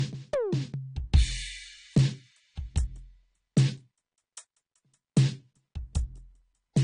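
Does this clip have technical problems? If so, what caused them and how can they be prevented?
Yes. Throughout the music the top end stops dead at 9.8 kHz. On a spectrogram this shows as a flat, hard ceiling with nothing above it, even though the file is a high-bitrate MP3. It is likely low-bitrate audio saved at a high bitrate. An earlier lossy encode, which fits AAC at around 32 kbit/s, discarded everything above that line, and re-encoding at a generous rate preserved the loss rather than restoring anything. To prevent this, always encode from the original uncompressed master, never from an already-compressed copy.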